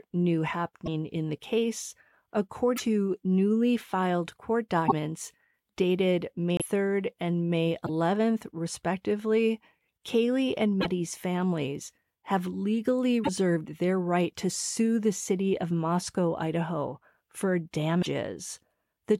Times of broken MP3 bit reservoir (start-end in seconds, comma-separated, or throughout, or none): 0.85-0.88, 2.76-2.80, 4.87-4.93, 6.57-6.62, 7.85-7.90, 10.80-10.86, 13.23-13.29, 18.01-18.06